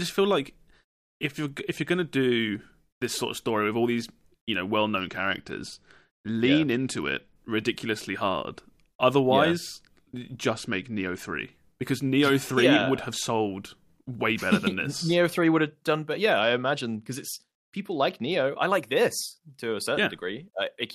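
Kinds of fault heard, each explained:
Bluetooth SBC bit pool drop: When the wireless link struggles, the encoder hands fewer bits to each frame, so the highest sub-bands are starved and the rest are quantised coarsely. Here the speech turns dull and gritty three times, at 4.98–7.36 s, 10.50–11.36 s and 16.41–18.45 s, which fits a bit pool falling from 31 to 12, near 88 kbps. A spectrogram shows the upper bands blanking out with grainy noise beneath, while the waveform envelope stays intact.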